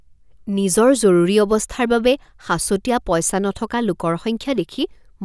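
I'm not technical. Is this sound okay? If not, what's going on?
Yes, nothing stood out as a problem when listening to this speech recording.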